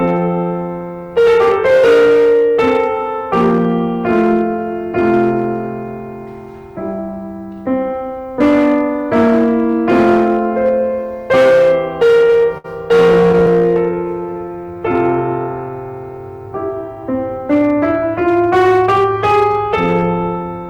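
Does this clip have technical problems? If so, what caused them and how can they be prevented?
Yes. Hard clipping runs through the whole piece. The music is driven about 12 dB past what a stage in the chain can pass, so peaks are cut flat, around 7 percent of samples, adding a harsh fuzz on loud passages. Setting gain so peaks stay below full scale, with headroom, prevents this.

Repeated stalls (stutter) occur from 12.27 to 12.66 s and from 13.12 to 13.49 s. Packets arrived late, so the jitter buffer kept running dry and the receiver extended the last sound: five gaps each time, up to 64 ms in the first burst, up to 11 ms in the second. A steadier network path or a deeper jitter buffer would prevent this.

A jitter buffer slow-down follows from 13.92 to 14.81 s. To rebuild its reserve, the receiver repeated short stretches of the music, adding 114 ms, so playback ran at 88 percent speed while keeping its pitch. 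A larger starting buffer avoids these refills.

A jitter buffer speed-up runs from 16.88 to 17.77 s. The jitter buffer held more audio than it aims for, so the receiver cut about 70 ms of short pieces to reduce the delay, hurrying playback to 107 percent and unsettling the tempo. Smoother packet delivery and gentler buffer adaptation prevent it.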